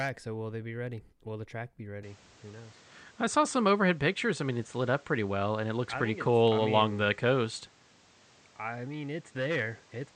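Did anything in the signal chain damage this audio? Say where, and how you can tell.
Yes. From 2.03 s, right after "the track be", to the end, the speech turns duller: nothing above 9 kHz survives, and a new background noise sits roughly 30 dB under the voice. There is no gap at the join and the level barely moves, so the input was likely switched to a poorer device at the driver level. A codec's bandwidth drop would narrow the top without bringing its own noise floor and change of tone.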